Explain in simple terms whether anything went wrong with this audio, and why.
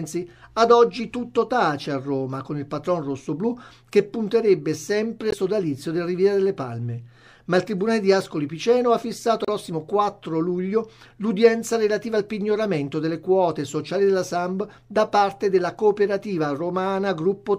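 Two short stretches of the compressed file were corrupted, a fault called damaged data in a compressed stream. At those points the decoder hit bytes it couldn't read properly, lost its place, and had to hunt for the next intact chunk before it could continue. You hear a brief glitch, such as a chirp, squawk, click or tiny gap, from 5.29 to 5.34 seconds and again from 9.45 to 9.49 seconds, each lasting under a twentieth of a second.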